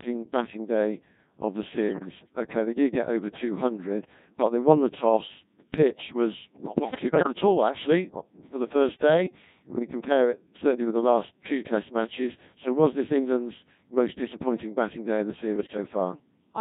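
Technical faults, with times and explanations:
Throughout: Codec 2 vocoder, with heavy damage. The speech is rebuilt from sine waves using only pitch, voicing, energy and a coarse spectral envelope, so it sounds robotic and buzzy. The very low detail fits the 1.6 kbit/s mode.
1.88–2.08 s, 6.76–7.32 s and 15.56–15.77 s: bit errors on digital voice radio. These bursts follow "batting day of the", "pitch was not" (ending before "at all actually uh") and "batting day of the". Roughly one bit in ten is flipped, so pitch, level and tone jump into warbles and bleeps across about four frames, and about thirteen in the middle burst.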